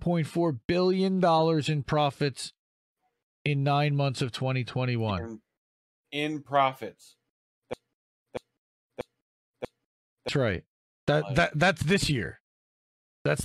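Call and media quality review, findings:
Broken-record loop, 7.73 to 10.29 s. Symptom: a 0.64 s fragment repeats exactly, back to back, four times before normal audio resumes. Component: likely a stalled player, encoder or stream that kept re-sending its last held fragment. Mechanism: fresh data stopped arriving, so the buffered piece replayed in place of new material. Audio due in that 2.55 s window is lost.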